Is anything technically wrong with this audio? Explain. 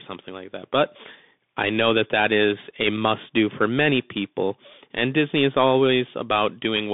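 Yes. A Bluetooth CVSD headset codec runs throughout. It codes each sample as a single up-or-down bit with an adapting step, which fits 64 kbps. The speech is confined to roughly 150 Hz–3.6 kHz, nothing above 3.8 kHz, with audible granular hiss and scratchy, slope-overloaded s sounds.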